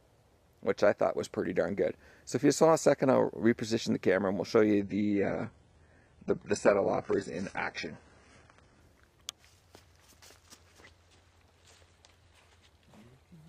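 From 4.80 to 8.80 s the adaptive stream drops to a lower bitrate: treble vanishes above about 11.1 kHz, consistent with low-rate HE-AAC, switching abruptly without a gap.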